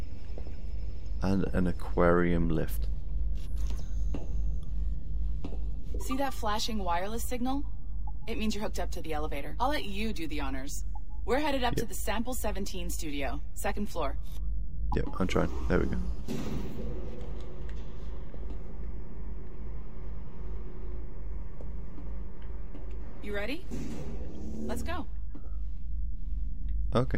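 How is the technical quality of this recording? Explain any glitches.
One technical fault runs through the whole recording. There is a DC offset of about -29 dBFS. A constant shift moves the waveform off the zero line. You can't hear it directly, but it uses up headroom. On a spectrogram it shows as a steady band at 0 Hz.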